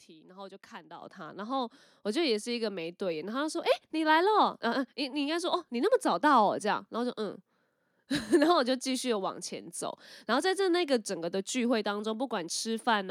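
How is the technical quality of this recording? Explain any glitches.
The recording has one clear glitch, a sudden level jump early in the speech. At 1.02 s the microphone volume stepped up: the device's input volume was raised in a single step, and everything captured afterwards is about 9 dB louder. The voice and the background noise rise together at exactly the same instant. A speaker leaning toward the microphone would mainly lift the voice and change its tone, and a gradual gain ride would swell over time rather than jump at once.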